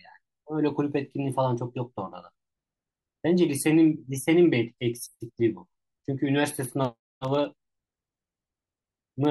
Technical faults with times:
6.55-9.25 periodic USB or driver dropouts

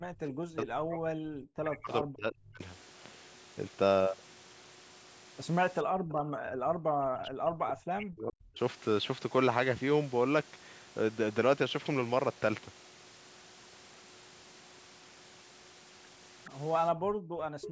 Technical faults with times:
0.00-0.23 background gated by the echo canceller
0.53-2.62 speech suppressed in double talk
5.84-6.67 background gated by the echo canceller
6.95-8.59 speech suppressed in double talk
16.44-16.50 echo leak
16.92-17.61 background gated by the echo canceller
17.61-17.69 echo leak

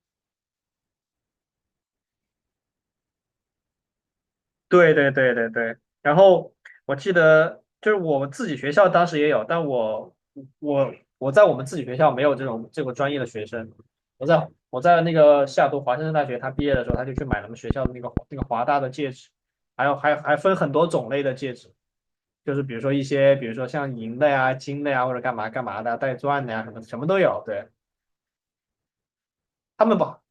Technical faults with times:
16.59-18.43 train of clicks

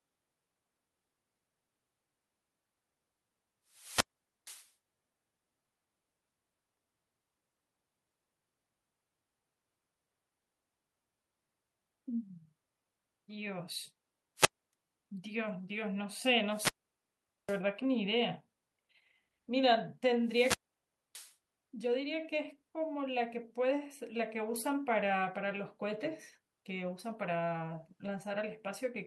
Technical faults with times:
3.69-4.72 wireless microphone squelch dropout
14.36-14.73 wireless microphone squelch dropout
16.50-17.61 wireless microphone squelch dropout
20.25-21.36 wireless microphone squelch dropout

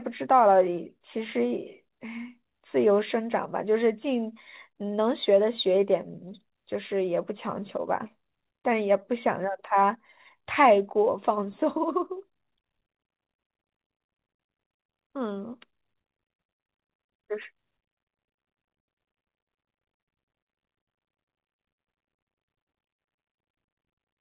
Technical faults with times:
none

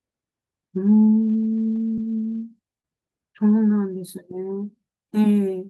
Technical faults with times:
1.95-1.99 short concealed packet loss
2.81-2.85 short concealed packet loss

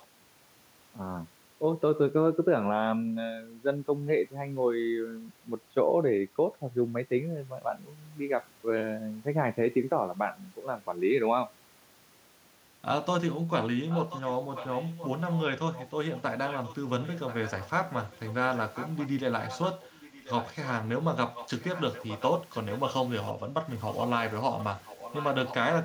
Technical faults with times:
0.00-0.07 echo leak
13.89-15.42 echo leak
15.73-19.09 echo leak
19.41-20.70 echo leak
21.35-22.94 echo leak
23.27-23.33 echo leak
24.59-25.55 echo leak

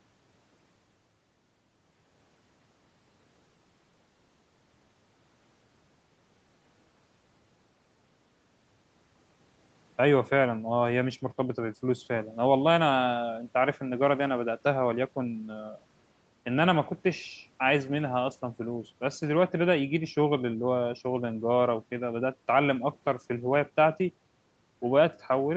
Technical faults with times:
none

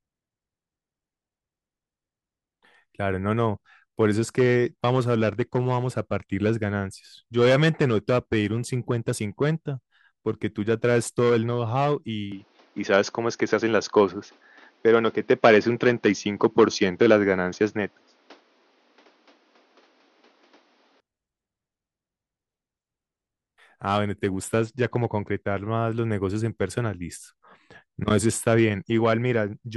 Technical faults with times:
12.32-21.00 input switched to a poorer device

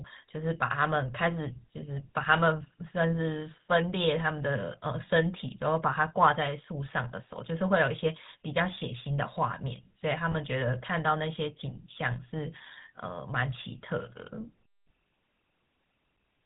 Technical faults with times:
0.00-16.46 GSM full-rate codec
10.32-10.35 lost GSM frames

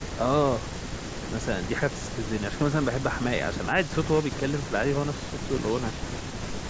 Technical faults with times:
none

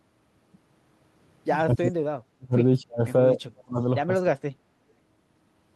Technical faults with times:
1.75-2.04 speech suppressed in double talk
2.37-3.01 speech suppressed in double talk
3.33-3.80 speech suppressed in double talk
4.21-4.46 speech suppressed in double talk

